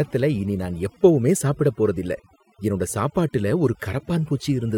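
Throughout, the speech plays over a lowered background that breaks up into twinkling specks: overdone noise removal, switching off frequency bands near the noise estimate, along with quiet speech detail.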